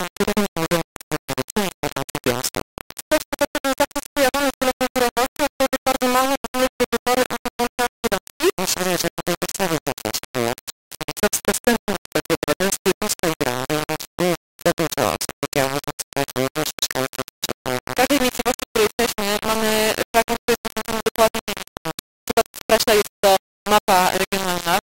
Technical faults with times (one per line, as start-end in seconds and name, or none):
0.00-24.99 low bit depth without dither